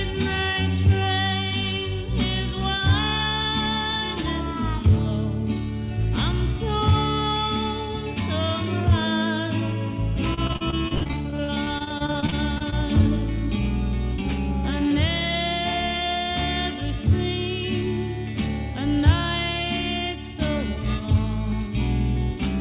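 The audio is band-limited to 4 kHz, which points to a narrowband G.711-style call codec. From 10.34 to 12.74 s there is repeated packet loss, heard as choppy, robotic sound. Many short gaps, none longer than 66 ms, are patched by stretching the previous sound, so about 28% of that stretch is filled-in audio.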